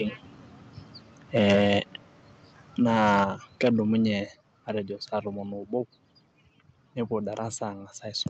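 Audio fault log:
1.36 to 1.79 s, 2.85 to 3.24 s, 3.63 to 3.70 s: microphone overload. Peaks run about 6, 8 and 3 dB past the converter's ceiling, flattening around one sample in twenty into a harsh crackle, likely from input gain set too high.
1.53 s, 3.24 s, 4.26 s: microphone volume stepped down. Level drops suddenly by about 2, 5 and 5 dB, the last just before "matejo saa tomon oobo", likely the call software cutting input gain after clipping.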